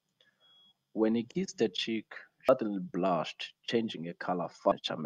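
At 2.49 s and again at 4.72 s the speech hits damaged data in a compressed stream: a stretch of the encoded bytes is corrupt, so the decoder cannot parse the frame there, loses its place and has to hunt for the next valid frame header before it can carry on. Each time this comes through as a brief chirp, squawk, click or short hole breaking into the speech.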